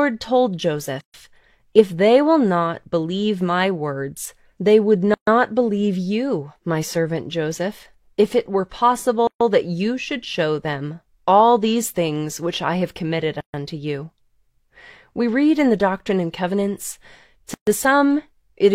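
This speech clip has a gap at a join of encoded pieces every 4.0 s, at 1.01, 5.14, 9.27, 13.41 and 17.54 s, each a silence of about 133 ms with smeared edges, such as between "my words they would" and "believe you my servant". Each gap is the encoder's start delay and last-frame padding left in where separately encoded pieces were joined untrimmed.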